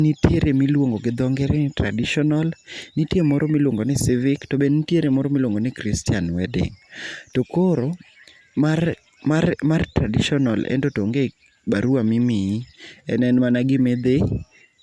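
No technical faults can be heard anywhere in this speech recording. There is nothing to mark at any point along its timeline.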